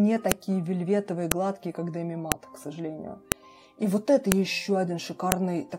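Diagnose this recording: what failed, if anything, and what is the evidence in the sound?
A sharp click recurs at 0.32, 1.32, 2.32, 3.32, 4.32 and 5.32 s, a file header played as audio at the storage stage. The 1.0 s spacing shows separate WAV pieces joined without stripping their headers, so a few dozen header bytes play as samples at each piece boundary, regardless of the underlying audio. On a waveform each event is a one-millisecond spike; on a spectrogram, a thin full-band vertical line.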